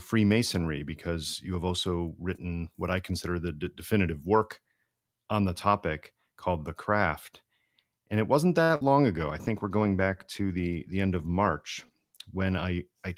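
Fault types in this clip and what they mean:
Short stall from a late packet: after "it wasn't", a packet arrived late, so the sound at 8.63 s is held for about 61 ms before continuing.
Burst of packet loss: at 8.76 s, several packets never arrived in time. The last sound is stretched and fades, then resumes with roughly 60 ms gone.
Call bitrate drop: from 9.15 s to 12.37 s the encoder falls from 32 to 16 kbps. The speech turns coarser and duller throughout.
Jitter buffer speed-up: between 12.50 and 12.79 s, the buffer sheds excess delay. Speech runs about 16 percent faster at unchanged pitch, sounding briefly hurried.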